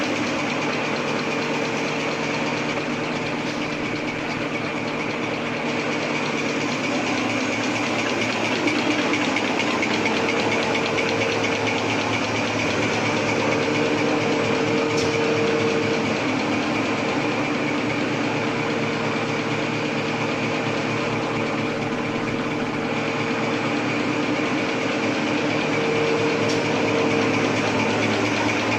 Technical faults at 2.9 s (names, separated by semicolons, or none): call bitrate drop